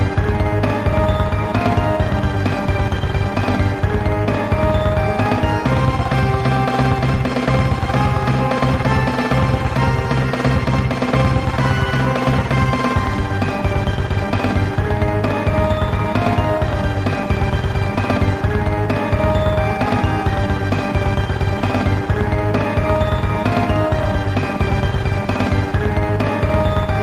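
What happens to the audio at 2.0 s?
Nothing goes wrong at 2.0 s; the audio plays through that moment intact, with no dropout, click, glitch or other fault to be heard.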